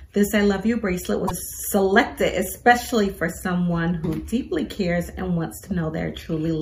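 Damaged data in the compressed stream produces a brief glitch from 1.24 to 1.31 s. Corrupted bytes in that stretch leave the decoder unable to read its frames correctly, so the audio is disrupted for about 70 ms until it locks onto the next valid frame header and resynchronises.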